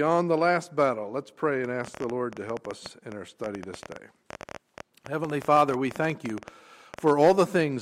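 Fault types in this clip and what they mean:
Train of clicks: uneven ticking, about 10.7 clicks per second from 1.65 to 7.0 s, peaking about 5 dB above the sound, likely from electrical interference.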